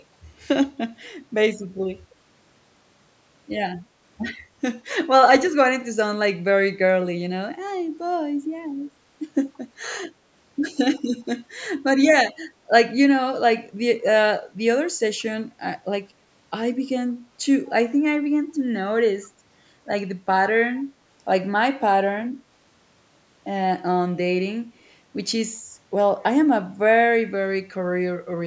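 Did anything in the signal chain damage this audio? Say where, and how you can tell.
Yes, an echo leak at the call processing stage. Faint delayed scraps, very roughly 35 to 40 dB below the speech, appear at 9.54–9.58, 10.96–11.01 and 15.19–15.23 s, each trailing by a fixed 176 ms. That is likely a far-end echo canceller letting loudspeaker pickup through. Room reverb would instead decay smoothly.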